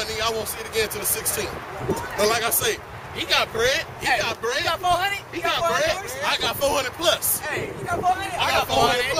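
No technical fault can be heard anywhere in the clip. Nothing in the audio stands out as a problem that would need explaining.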